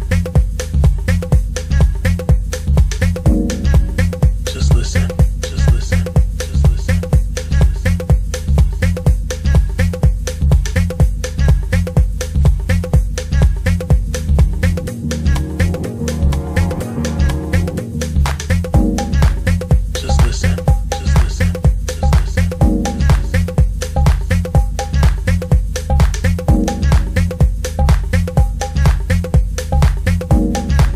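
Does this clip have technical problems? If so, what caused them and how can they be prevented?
Yes. At 26.64 to 26.67 s, compressed frames were skipped: a damaged or missing frame, roughly one and consistent with a 46.4 ms frame, was never decoded, so the audio jumps ahead by around 50 ms, leaving a brief glitch at the join. Prevent this by checksumming files and using reliable transfer or storage.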